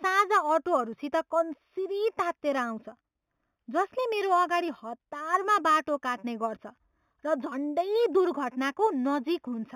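Imaging from linear upsampling runs throughout the speech, consistent with audio raised from 8 kHz to 44.1 kHz by straight-line interpolation. That weak filter dulls the top of the band and leaves a mirrored copy between 4 and 8 kHz, roughly 25 dB down, heard as a faint metallic shimmer on sibilants.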